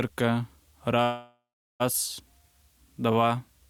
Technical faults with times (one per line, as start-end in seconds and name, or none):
1.03-1.82 call audio freeze